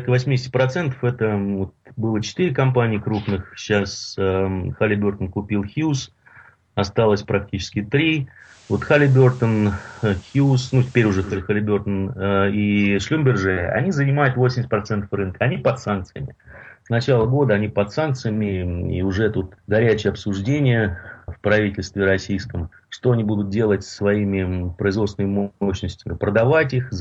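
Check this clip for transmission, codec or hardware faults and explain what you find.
One fault. From 8.38 to 11.42 s, digital radio blending to analogue: the receiver lost digital and cross-faded over 0.2 s to FM, bringing faint hiss and a level shift of about 2 dB.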